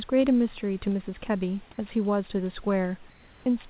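Speech recorded over a narrowband call path with nothing above 4 kHz, consistent with G.711 at 64 kbps, with room noise about 33 dB below the speech. From 3.1 to 3.46 s, a pause of about 360 ms, the real room background gives way to comfort noise in place of the background: a steady, featureless hiss about 2 dB quieter, with the room's texture gone until sound resumes. This is likely discontinuous transmission, with the receiver synthesising noise while the sender is silent. Unlike a dropout or noise gate, the pause never falls to true silence.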